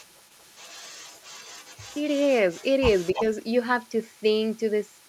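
Speech with an echo leak running from 0.0 to 5.1 s. A faint copy of the voice trails each phrase by 305 ms, likely from a loudspeaker whose echo canceller let residue through. On a spectrogram, weak duplicate harmonic patterns sit about 0.3 s behind the originals.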